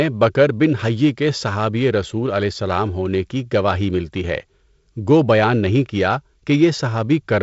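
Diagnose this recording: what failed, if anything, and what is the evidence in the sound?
Nothing failed in this recording, and the sound gives no evidence of any fault.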